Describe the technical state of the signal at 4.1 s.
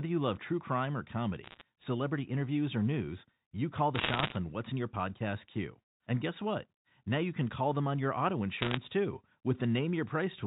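At 4.1 s, bit errors on a digital phone line (3.95 to 4.36 s, between "news you call the" and "on what's in your") flip roughly one or two percent of bits, corrupting single samples into sharp ticks and crackle over the speech.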